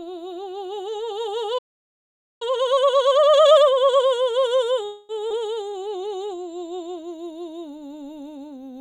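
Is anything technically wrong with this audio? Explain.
Yes. Several playback and network faults interrupt this music.

From 1.58 to 2.42 s there is a playback stall. The music stops dead for about 0.83 s. The player likely ran out of data, then resumed where it stopped.

From 2.42 to 4.06 s comes time-compressed catch-up. The player cuts and cross-fades small pieces to clear its backlog. The music rushes at 1.5 times speed, pitch unchanged.

From 4.85 to 5.12 s there is a call audio freeze. The last sound is stretched into a fading buzz for 240 ms. Packets were likely held up, emptying the jitter buffer. The music then resumes with nothing lost.

At 5.29 to 5.33 s the audio skips ahead. Roughly 70 ms of music is dropped. The two sides of the jump are spliced almost directly.

From 5.65 to 6.38 s a jitter buffer slow-down adds 88 ms. Short pieces are repeated to rebuild the reserve. The music drags at 89% speed, with its pitch held.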